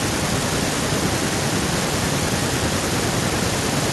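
Nothing goes wrong anywhere in this short bit of speech, so there's no technical fault to point to.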